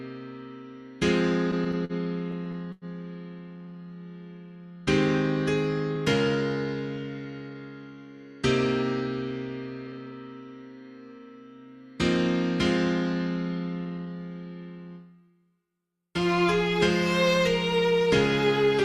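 From 1.51 to 1.92 s and again from 2.31 to 2.85 s the audio drags and hitches in repeated stalls (stutter), four in each stretch, the longest about 97 ms. Packets arrived late, draining the jitter buffer, so the receiver stretched the last sound until playback resumed.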